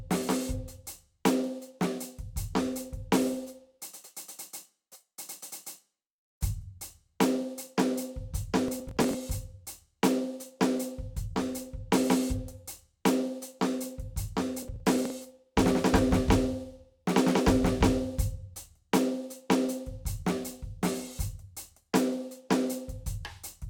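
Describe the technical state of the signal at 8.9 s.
At 8.9 s you're right in the middle of a burst of processor overload crackle that runs from about 8.68 to 9.14 s. The processor can't finish each small buffer in time, and since nothing gets held over, every miss simply drops that chunk of the music. The gaps point to buffers of around 10 ms, with roughly twenty of them lost across that stretch, so what you hear is a gritty, tearing crackle sitting on top of the music until the load clears.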